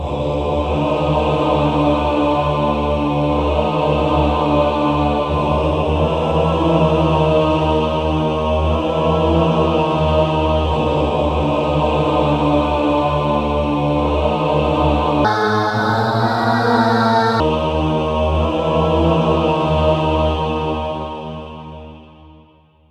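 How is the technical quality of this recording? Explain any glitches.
One glitch stands out, a section at the wrong speed. From 15.25 to 17.40 s the sound suddenly runs 1.45 times fast, so pitch jumps up by roughly seven semitones and everything turns bright and hurried. That's likely a clock or rate mismatch during editing or playback.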